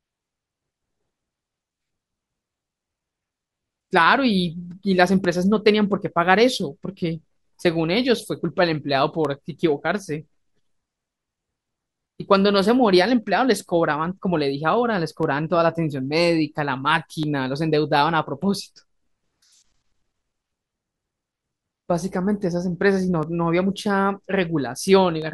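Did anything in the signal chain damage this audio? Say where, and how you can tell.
Yes. Regular ticks every 2.0 s from 1.26 s to 25.22 s, each roughly a millisecond of speech lost to silence. These are periodic USB or driver dropouts at the driver stage.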